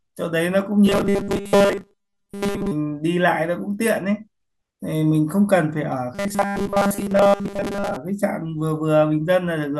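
Audio likely arrived too seldom, so short buffers were replayed in place of skipped speech from 0.86 to 2.72 s and again from 6.15 to 7.96 s. Most of each stretch is repeats, giving robotic sound from repeated short buffers: a rigid 200 Hz metallic buzz, consistent with 5 ms loops.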